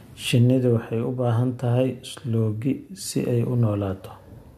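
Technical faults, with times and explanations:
Nothing here to flag: the speech comes across without any technical faults worth noting.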